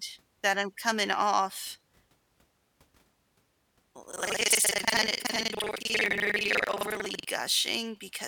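Speech, with buffer tearing from 4.09 s to 7.25 s: a gritty, robotic rattle at 21.5 Hz that rides on the speech and stops in the pauses. The rate fits a 2048-sample buffer whose writer and reader have slipped. About half of each period replays audio from roughly a tenth of a second earlier, spliced in with hard joins. The waveform shows abrupt steps at regular intervals, and the spectrogram shows evenly spaced vertical broadband lines through that span.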